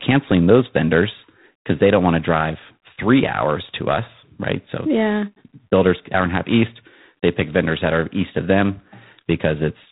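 The speech has passed through G.726 ADPCM coding at a low rate, which fits 24 kbit/s, with only 3 bits per sample for the prediction error. Throughout, a harsh, rasping hiss rises and falls with the speech level, and nothing above 3.9 kHz survives.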